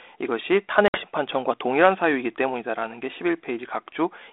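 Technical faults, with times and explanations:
0.88 to 1.02 s, packet loss on an ADPCM call: about 60 ms of speech, a few packets' worth, drops out as a hard-edged silent gap. The G.726 decoder, running at 32 kbit/s within a 300 Hz to 3.6 kHz telephone band, builds each sample from its own adaptive prediction and step size. During the gap those drift away from the sender's, so speech resumes slightly distorted until the two resynchronise over the following tens of milliseconds.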